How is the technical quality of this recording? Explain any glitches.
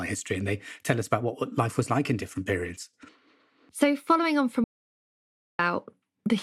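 There's one clear glitch in this speech recording: an audio dropout to silence from 4.64 to 5.59 s, so just under a second is gone. The sound cuts off mid-flow and the gap is dead digital silence, with no room tone or hiss underneath, then it picks up again abruptly. That pattern likely comes from the input being lost for a moment, through a loose connection, a link failure or a brief mute, while the recorder kept writing silence.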